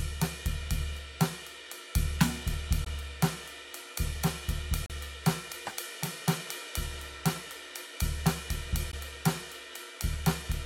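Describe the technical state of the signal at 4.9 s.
At 4.86 to 4.90 s the music stops for about 38 ms: a gap between stream segments. Two segments' timestamps fail to meet, so silence fills the hole. Unlike a dropout, nothing is lost; the music resumes exactly where it stopped, just later.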